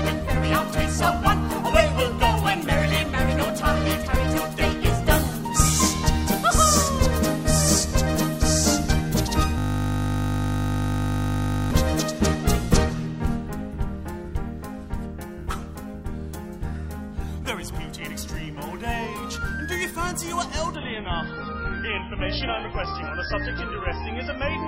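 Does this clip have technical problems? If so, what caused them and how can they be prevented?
Yes. From 9.58 to 11.71 s there is a system hang loop: the system froze while the audio hardware kept replaying one 20 ms buffer, so the sound becomes a steady 50 Hz buzz repeated about a hundred times. Unlike a dropout, this is exact repetition, not silence. It can be prevented by fixing the driver or system stall and letting the audio device mute itself when its buffer stops being refilled.

From 20.75 s to the end, the stream switches to an adaptive stream at a lower bitrate. The sound points to a drop from MP3 at around 128 kbit/s to roughly 16 kbit/s, leaving nothing above 5.5 kHz, with more codec artefacts. It differs from a simple low-pass filter because the change is sudden, with no gap, and brings artefacts as well as lost treble. It can be prevented with a steadier connection, larger client buffering or a higher minimum bitrate.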